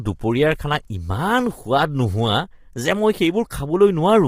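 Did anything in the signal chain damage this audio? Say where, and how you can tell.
Yes, the codec stage. Across the whole speech clip the voice sounds rough and grainy, with noise filling between the harmonics and a thin, artificial top end. That's likely low-delay AAC compression at a starved rate, fitting something near 24 kbps, where short frames smear pitch detail.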